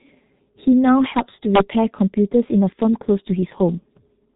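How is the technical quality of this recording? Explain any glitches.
Quality is poor, held back by one fault present from start to finish. G.723.1 codec damage runs throughout. The coder works in coarse 30 ms frames at a rate that points to roughly 6 kbit/s, discards everything above 3.8 kHz, and updates its model sluggishly, so the speech sounds muffled and hoarse, with smeared consonants.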